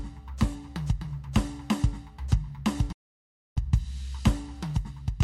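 At 2.92 s the music drops out in a digital broadcast dropout: the receiver stopped getting clean frames and muted, fading down in about 3 ms. Sound returns at 3.57 s, roughly 640 ms later, with that stretch simply gone, which fits around twenty lost frames.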